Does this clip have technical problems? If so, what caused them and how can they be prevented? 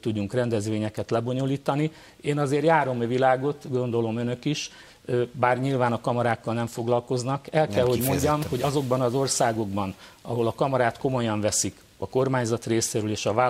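No, no technical problems can be heard here.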